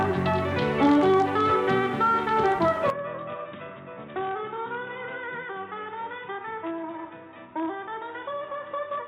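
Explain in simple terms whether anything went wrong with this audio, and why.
Input switched to a poorer device at 2.90 s: the sound turns dull and quieter, losing everything above 3.8 kHz, likely a weaker microphone taking over.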